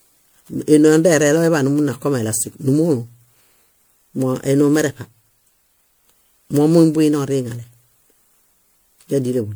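Speech, and it has generation loss all the way through. It sounds swirlier, more smeared and hollower than a single MP3 pass should, and consonant attacks come out blurred. The likely cause is the audio being decoded and re-encoded around ten times. Each pass quantises again on a shifted frame grid, so the noise and spectral holes keep piling up. Nothing comes through above about 20.9 kHz, and the chain is MP3 at 128 kbit/s.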